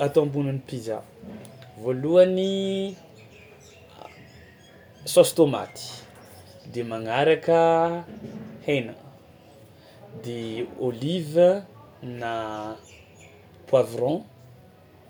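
No technical faults can be heard anywhere in the recording; the signal stays continuous and steady from beginning to end.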